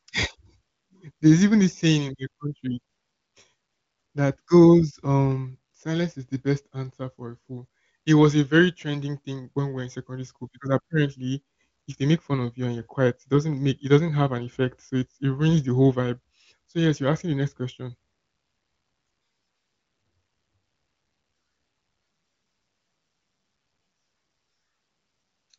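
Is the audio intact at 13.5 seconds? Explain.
Yes, the audio is intact at 13.5 seconds, with no audible fault at that moment.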